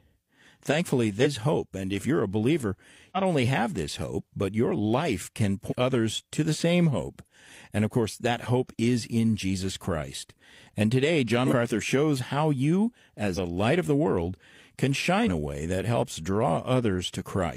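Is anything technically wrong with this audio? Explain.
Yes. There are six instances of compressed frames skipped, at 1.16–1.27 s, 3.12–3.17 s, 5.67–5.74 s, 11.43–11.53 s, 13.33–13.38 s and 15.19–15.29 s. Whole coded frames never reached the output, either lost from the file or rejected by the decoder as corrupt. Each time, the speech leaps forward by roughly a tenth to a third of a second, for example between "if you're a believer" and "only have this hope".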